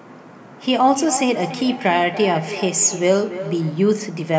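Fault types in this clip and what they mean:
Feedback echo between two devices: a nearby device replays the speech into this microphone, so it recurs roughly every third of a second, about 11 dB down.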